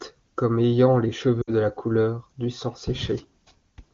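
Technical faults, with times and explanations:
1.42 to 1.50 s, lost AMR speech frames: radio errors corrupted about 60 ms of the AMR-WB stream, which fits three 20 ms frames. The decoder repeated the last good pitch and vocal tract settings at falling gain, so the sound smears, fades quickly, then returns briefly weak.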